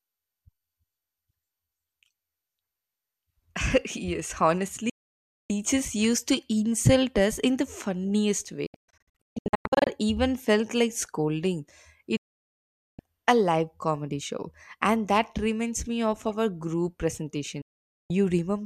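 The speech cuts almost instantly to silence at 4.90–5.50 s, before "used to". It breaks into scattered short holes across 8.66–9.87 s, after "us in the funniest". It drops again at 12.17–12.99 s, before "a live comedy show", and at 17.62–18.10 s. This is digital broadcast dropout: the receiver muted on lost or corrupted frames, discarding that audio.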